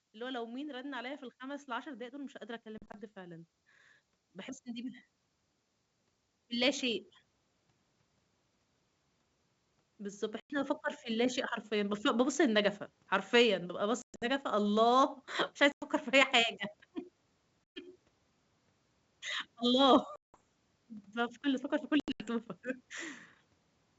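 From 0.05 s the speech and its background swell together, climbing about 10 dB by 5.09 s. This is automatic gain rising: the level control judged the input too quiet and lifted its gain gradually. A smaller swell of about 4 dB follows from 9.97 to 11.38 s.

Hard-edged holes open at 2.78, 10.40, 14.02, 15.72, 17.70, 20.16 and 22.00 s. Each loses 80 to 180 ms of sound, and the ones at 2.78, 14.02 and 22.00 s are broken into several shorter gaps. After each hole the sound returns slightly distorted. This is packet loss on an ADPCM call. The missing packets were replaced by silence, so the decoder's adaptive predictor and step size drifted from the sender's and needed some tens of milliseconds to realign.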